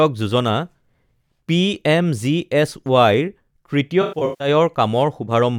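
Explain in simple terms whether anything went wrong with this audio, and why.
Something did go wrong near the end of this speech clip. From about 4.02 to 4.48 s there is AAC frame loss with concealment. Small chunks of the compressed audio went missing. The decoder guessed at the gaps by reusing the last good sound. About 277 ms was lost, spread over roughly 384 ms. The longest single gap was around 150 ms. The result is a smeared, hollow stretch.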